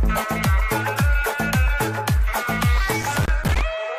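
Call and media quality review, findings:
Loose connector crackle, 2.92–3.61 s. Worn or dirty contact in the cable or jack path making and breaking intermittently, chopping the signal. Heard as an irregular burst of scratchy crackle lasting about 0.7 s.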